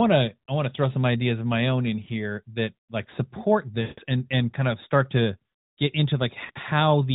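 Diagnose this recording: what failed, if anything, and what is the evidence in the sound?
Network stage: radio errors corrupted lost AMR speech frames, so the decoder repeated its last pitch and vocal tract settings at falling gain. There is a brief warble at 2.04–2.08 s after "of my own in", a drawn-out 160 ms fade at 3.82–4.00 s before "and and kind of", and a short dip at 6.46–6.51 s after "of start to get".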